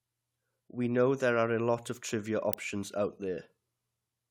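It's a speech recording with one electrical switching spike, a sharp snap at 2.53 s, right after "a lot of trivia". It's a tight burst lasting only a couple of milliseconds, peaking fairly hot at around -10 dBFS. That kind of snap is most likely a nearby switch, motor or static discharge arcing and getting picked up on the audio line, rather than anything in the recording itself.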